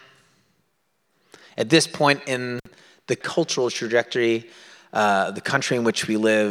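A loose cable or plug briefly loses contact at 2.59–2.67 s, right after "at this point" and before "the cultural trajectory uh". This intermittent contact opens the line for about 57 ms, cutting the speech out with crackle at each edge and faint hiss in between.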